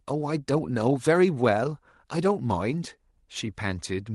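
Speech over a WebRTC call path, with the top end limited to about 12 kHz as expected from the call codec; no technical faults are present.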